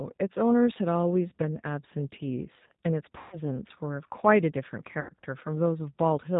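The whole clip is speech carried by the G.729 codec at 8 kbit/s. Its damage is plainly audible. The codec models each 10 ms frame with a vocal tract filter, a pitch predictor and a few pulses. Nothing above 4 kHz survives. The result sounds muffled, slightly rough and synthetic. Any background noise takes on a watery warble.

At 1.30 s comes the first VoIP packet loss concealed by the speech codec. It runs to 1.32 s. About 20 ms of audio is missing, which fits a single lost packet. The decoder repeats its last pitch and filter at falling gain. The result is a brief stretched sound.

At 3.18 s a longer gap begins, lasting until 3.39 s. About 140 ms is missing, which points to seven consecutive packets. The concealment stretches the last sound out as it fades. The speech then returns weak, because each frame rebuilds from the damaged one before.

At 5.01 s a third gap runs to 5.12 s. About 80 ms is lost, consistent with four packets. 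It gives the same fading, stretched sound and a weak or distorted recovery.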